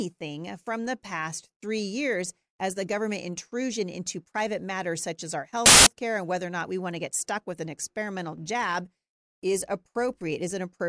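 A speech clip with file tags played as audio: at 5.66–5.87 s, between "matters such as our" and "care and whether or", embedded cover-picture data is read as samples, giving a hard-edged burst of very loud white noise. The waveform shows a solid slab, and the spectrogram a flat broadband block with sharp vertical edges.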